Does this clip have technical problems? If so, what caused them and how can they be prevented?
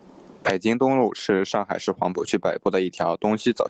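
Yes. Gain pumping runs through the whole speech clip, with level swings of about 20 dB, likely from input gain set far too high while a fast limiter keeps clamping it. Preventing it means setting the microphone gain lower so the limiter rarely engages.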